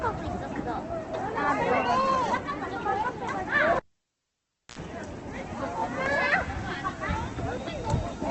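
Throughout, the sound is grainy and rough, with tones turned noisy and nothing above 8.3 kHz. This is likely Opus compression in its music mode at a very low bitrate, around 12 kbps. It is set apart from MP3 by the absence of swirling, watery holes.

From 3.76 s to 4.79 s, a pop cuts the sound to near silence for about 0.98 s. A 72 ms burst of 60 Hz mains buzz follows, then a second pop as it returns. This is a cable pulled and plugged in. The buzz and the two pops distinguish it from a plain dropout.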